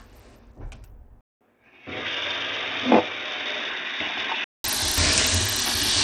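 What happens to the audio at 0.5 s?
At 0.5 s you're hearing the same damage that runs through the whole clip: the treble is thin and flickers in and out, and a gritty, aliased noise rides on the sound. That's most likely Bluetooth SBC compression. With only a few bits to share among its handful of wide frequency bands, the codec starves the weak top bands and coarsely rounds off the rest. The damage is plainly audible, which fits a low bitrate around 80 kbps.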